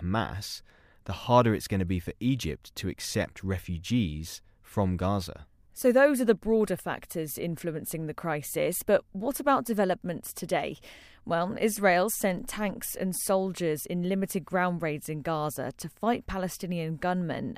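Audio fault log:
No audible faults detected.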